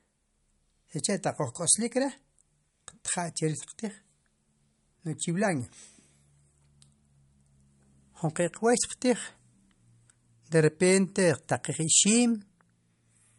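From start to finish the speech has nothing above 11.2 kHz, with a dull, swirly and smeared texture typical of heavy MP3 coding. This is likely low-bitrate audio saved at a high bitrate: the smearing and cut-off fit an earlier pass near 48 kbit/s, and re-encoding at a higher rate could not undo them. On a spectrogram, energy stops at a flat horizontal edge around 11.2 kHz, with patchy, blotchy detail just below it.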